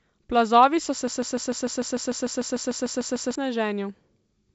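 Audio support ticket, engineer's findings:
Broken-record loop, 1.07–3.35 s, right after "so se". A 149 ms fragment repeats back to back about 15 times. Likely a player or stream stall re-sending its last buffer; the audio due in that span is lost. The G.722 wideband path is audible, with content up to about 7.7 kHz.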